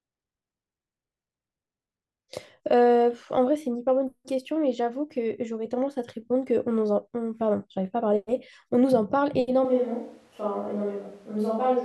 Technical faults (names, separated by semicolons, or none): switch to a distant microphone